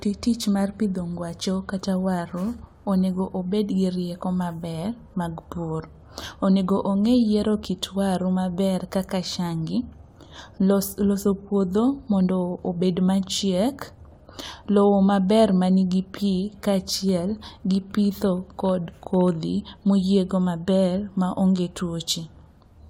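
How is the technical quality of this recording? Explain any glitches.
No glitches can be heard anywhere in the speech recording, and its technical quality is sound throughout.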